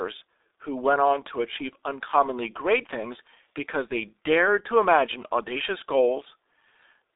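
G.723.1 codec damage runs through the whole speech clip: the sound is confined to roughly 300 Hz to 3.7 kHz, with nothing above, and heavy coding leaves it muffled and hoarse with smeared consonants, which fits a very low rate near 6.3 kbit/s and a coarse, slowly updated model.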